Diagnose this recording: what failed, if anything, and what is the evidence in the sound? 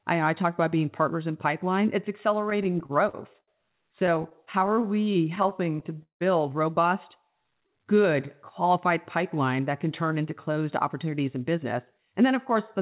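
Repeated stalls (stutter) at the network and jitter buffer stage run from 2.5 to 3.5 s and again from 4.0 to 6.22 s. The first stretch has 9 short holds totalling 194 ms, the longest 74 ms. The second has 21 holds totalling 358 ms, the longest 178 ms, which fades. Late packets drained the buffer, so the receiver stretched the last sound each time. Unlike packet loss, nothing is skipped: the speech resumes exactly where it paused, just dragged.

A jitter buffer slow-down runs from 7.31 to 8.27 s, ending just before "qualified pipeline that can". The speech plays at about 90% speed, with roughly 99 ms of repeated pitch periods inserted to rebuild the buffer's reserve. The sound is drawn out but the pitch stays put. That separates it from a clock or sample-rate error, which would lower the pitch along with the tempo. There are no discrete halts here, unlike the stutter.

A jitter buffer speed-up runs from 10.18 to 12.8 s, starting just after "pipeline that can turn". 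Playback runs at about 107%, with around 0.2 s trimmed away in small pitch-period cuts. An overfull buffer, likely left by the earlier late packets arriving together, was being drained. The hurried delivery at unchanged pitch rules out a resampling fault. This all sits on the narrowband G.711 A-law call path, whose band ends at 4 kHz.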